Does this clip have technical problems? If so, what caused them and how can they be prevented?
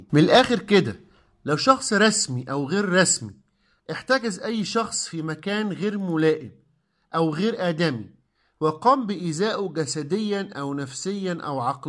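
Yes. A resampler restarted on every block, from 3.2 to 6.7 s, produces regular ticks at 10 Hz over the speech. Each 100 ms block was converted in isolation, apparently halving a 48 kHz rate to 24 kHz, so every block edge lacked its true neighbouring samples. Keeping one continuous resampler with its filter state carried across blocks prevents it.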